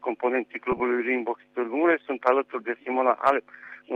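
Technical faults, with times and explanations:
0.72–0.80 s: lost LE Audio frames. About 30 ms vanished in short gaps scattered over 80 ms, fitting three 10 ms frames. The LC3 decoder refilled each gap with the previous spectrum with randomised signs, so the sound briefly smears into noise.
3.65–3.67 s: lost LE Audio frames. A 20 ms gap, which fits two frames, was concealed by repeating the last spectrum with random phase, leaving a brief noisy blur in place of clean sound.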